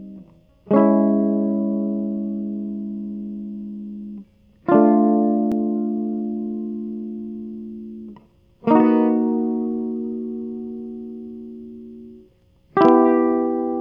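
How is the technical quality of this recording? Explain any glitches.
No glitches or faults are audible.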